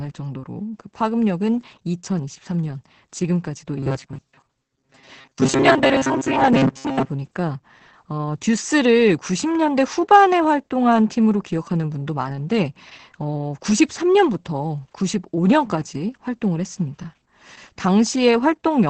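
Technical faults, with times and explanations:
Throughout: Opus voice compression. Nothing is present above 8.6 kHz, and the speech sounds muffled and hoarse with a faint robotic edge. This fits SILK linear-prediction coding at around 10 kbps, which codes the excitation coarsely. Unlike the buffer fault, the damage is steady and has no fixed-pitch buzz.
3.78–7.10 s: Robotic sound from repeated short buffers. The speech becomes a rigid metallic buzz at 134 Hz that still roughly tracks the words. The likely cause is a buffer of about 7.5 ms being replayed, with around half of the real audio skipped. The locked pitch sets it apart from codec roughness.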